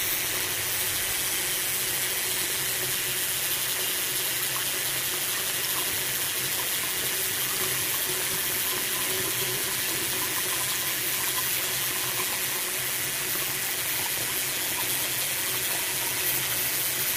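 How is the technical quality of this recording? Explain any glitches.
The recording has one fault running from start to finish: overlap-add ripple. The audio was split into windowed frames and rejoined with overlaps whose gains don't sum evenly, so the level dips by about 6 dB once per frame, at around 200 Hz. It sounds like a metallic buzz. Unlike compressor pumping, the rate stays fixed regardless of what the sound is doing.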